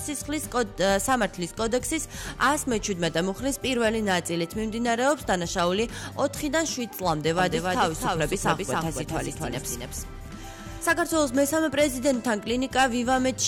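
From about 7.39 s to 10.93 s there's a doubled audio track: a second full copy trailing roughly a third of a second behind, a few dB quieter, with no decay or room colour. It cuts in and out abruptly, likely a slower second capture path.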